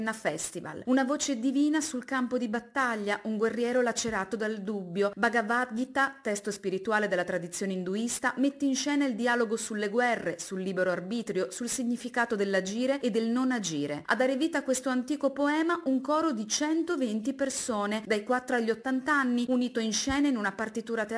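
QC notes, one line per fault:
Throughout: aliasing. The audio was taken down to a 22 kHz rate with no anti-alias filter first, so content above the 11 kHz fold point reflects back as unrelated, inharmonic tones at roughly 20 dB below the signal. Sibilant and bright material sounds gritty and metallic, and the spectrum stays full right up to the band edge. Plain low-passing would only dull the top end without adding these false tones.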